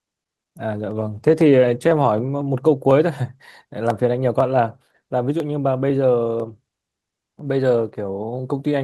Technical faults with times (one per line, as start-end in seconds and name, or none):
0.80-2.15 call bitrate drop